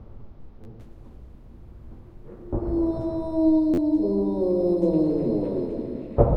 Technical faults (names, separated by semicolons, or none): repeated buffer